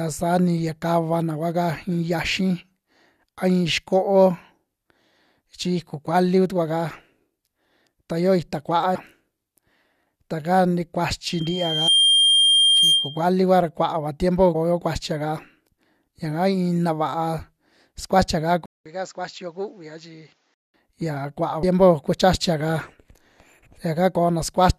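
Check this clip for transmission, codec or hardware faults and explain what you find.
Three kinds of fault turn up here: skipped compressed frames, a feedback squeal, and what sounds like a switch to a worse input.

The compressed frames skipped happen four times: 8.94 to 8.96 s, 11.87 s, 14.54 s right after "kua ra kua'ava tiempo", and 21.62 s. Chunks of the stream never got decoded, so the audio jumps forward. Two of the jumps lose around a tenth of a second. The one at 11.87 s drops closer to half a second, and the one at 21.62 s about a fifth. The step sizes fit a frame length of roughly 23 ms.

The loudspeaker feedback squeal runs from 11.30 to 13.29 s, starting just after "ta ka ni" and ending before "kua ra kua'ava tiempo". The mic is hearing its own speaker, and at 3.2 kHz the loop gain tops one, so that tone feeds itself. It swells over well under a second into a steady whistle that sits a few dB above the speech, and the 11.87 s skip lands inside it.

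From 18.66 to 20.74 s the sound changes the way it does when the input switched to a poorer device, likely a fallback mic or a headset's call profile taking over. There's a gap of about 200 ms at the changeover. After it, nothing comes through above 7.6 kHz, so the sound turns dull. The level drops by around 10 dB, and a new noise floor appears roughly 40 dB down.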